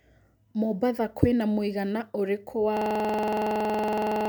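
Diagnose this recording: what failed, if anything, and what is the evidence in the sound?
A system hang loop at the driver or buffer stage. From 2.77 s, just after "kwĩna mũigana ũrĩkũ wa", the speech freezes into a steady 21.5 Hz buzz to the end. The hardware keeps replaying one 46 ms stretch, which fits a 2048-sample buffer.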